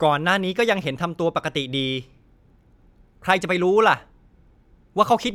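There are no technical faults to describe at any point in the clip.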